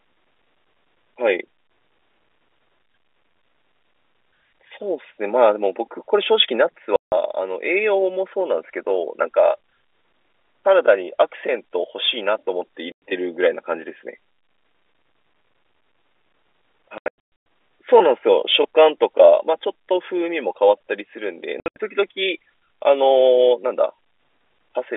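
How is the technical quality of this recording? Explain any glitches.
The speech has clear dropouts. Packet loss filled with silence occurs at 6.96 s (160 ms), 12.92 s (100 ms), 16.98 s (about 400 ms in scattered gaps, longest 120 ms) and 21.6 s (140 ms in scattered gaps, longest 80 ms). Lost packets were replaced by silence, so each hole cuts off sharply with hard edges. The hole lengths fit 20 ms packets. The telephone-band G.711 sound, limited to roughly 300 Hz to 3.6 kHz, can be heard throughout.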